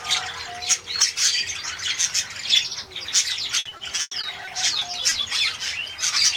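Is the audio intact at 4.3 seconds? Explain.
No. From 3.59 to 5.13 s the stream suffers repeated packet loss (robotic sound): ten separate gaps open in quick succession, the longest 100 ms, and each is covered by stretching the last received audio forward, about 320 ms in all and roughly a fifth of that stretch. Because the patches recur so closely, the sound at 4.3 s comes out choppy, with pieces of it missing.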